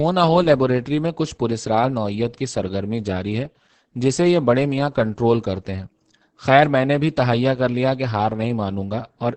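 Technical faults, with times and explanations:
Throughout, Opus voice compression: the speech stops at about 8 kHz and sounds muffled, hoarse and faintly robotic. The SILK linear-prediction coder spends too few bits on the excitation, which fits a wideband setting at roughly 10 kbps.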